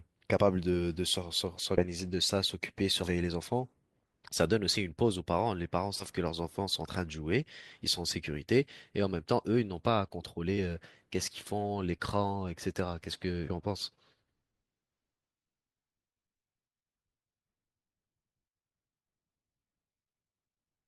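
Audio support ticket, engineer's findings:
Compressed frames skipped in the speech at 0.37–0.40, 1.77–1.82, 3.03–3.07, 5.99–6.05 and 13.47–13.52 s. Decoder drops whole 20 ms frames, a few at a time, so the audio jumps ahead roughly 40–100 ms. Waveform shows an abrupt envelope discontinuity; spectrogram shows a vertical seam.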